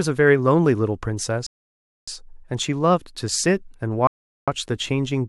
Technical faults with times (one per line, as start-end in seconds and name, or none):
1.46-2.08 rebuffering stall
4.07-4.48 rebuffering stall